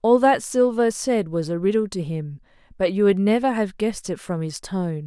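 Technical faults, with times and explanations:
Nothing in the speech stood out as a technical problem on listening.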